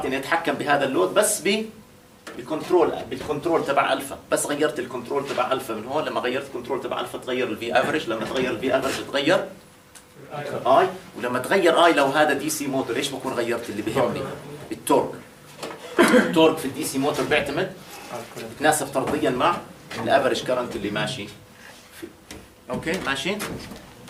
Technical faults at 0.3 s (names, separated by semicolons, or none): none